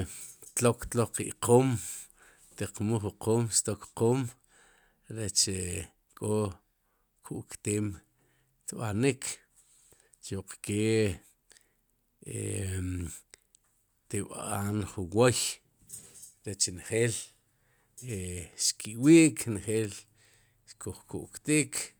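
Nothing stood out as a technical problem on listening to this speech recording.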